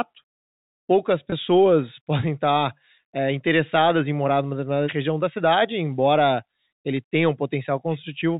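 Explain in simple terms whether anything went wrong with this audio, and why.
At 1.30 to 1.32 s a packet loss with pitch repetition occurs: about 20 ms of speech went missing, and the receiver filled it by repeating the last bit, giving a brief held, buzzy sound. The telephone-style G.711 coding can be heard as a muffled, narrow sound.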